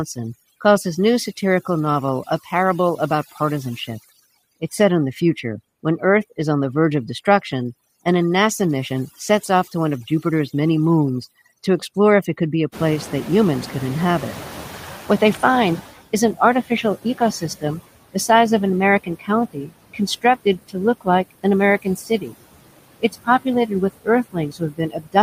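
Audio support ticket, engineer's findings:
Overdone noise removal, throughout. Background broken into twinkling, warbling specks. Reduction set too strong, so individual bands near the noise estimate are switched off, taking quiet voice detail too. Isolated specks in the floor separate it from ordinary suppressor pumping.

Noise suppressor artifacts, throughout, roughly 18 dB reduction. Residual noise sinks between words and comes back under them. Frame-by-frame gain on bands judged steady noise. The level tracks speech activity, unlike the isolated specks of over-removal.

Noise suppressor catching up, 12.72 to 15.97 s. Room noise jumps by about 22 dB near 12.5 s, settling about 15 dB under the speech. The noise comes through less reduced, then sinks over 3.25 s to about 13 dB of reduction as the estimate adapts. The background is what changes level here, not the voice.

Speech cut by the noise suppressor, 16.34 to 17.64 s (roughly 0.2 s affected), 19.04 to 21.45 s (roughly 0.5 s), 21.82 to 22.36 s (roughly 0.3 s), and from 23.0 s to the end. 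Parts of the speech sound swallowed, down about 17 dB, about 20 dB in the last span. The suppressor is treating speech as noise, so parts of the voice are turned down with the background.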